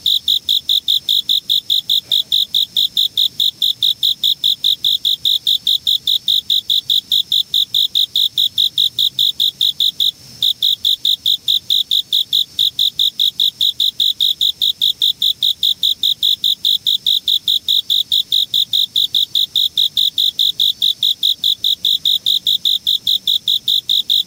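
Gain pumping runs through the whole clip. The gain swings by around 5 dB. Loud and soft parts sit too close in level. The likely cause is input gain set far too high, with a fast limiter clamping down on each peak.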